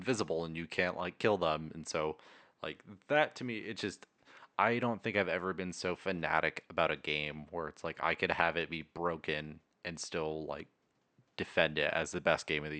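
Nothing stood out on listening to this speech recording, apart from a faint room noise about 51 dB below the speech, which belongs to the space where it was recorded rather than to the system.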